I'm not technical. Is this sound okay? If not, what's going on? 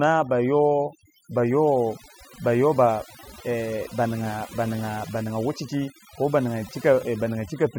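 No. Throughout this speech clip there is overdone noise removal: a cleanup tool set too strong has stripped away not just the background noise but the quieter parts of the voice along with it. You hear it in the pauses, where the background drops away and breaks up into twinkling, warbling specks. Ordinary background noise would be steady; here, that noise has been scrubbed out too hard.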